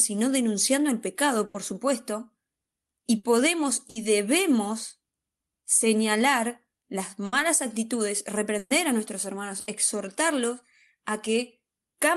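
Speech, interrupted six times by a burst of packet loss: at 1.45, 3.17, 3.89, 7.25, 8.58 and 9.60 s. Each time, a run of audio failed to arrive, and the receiver stretched the last sound, fading it out. Most gaps are filled for 60 to 90 ms, with about 60 ms of speech skipped. The worst, at 8.58 s, fills 120 ms, drops 120 ms and ends in 30 ms of silence. At 1.45 s the timing also shifts by 30 ms.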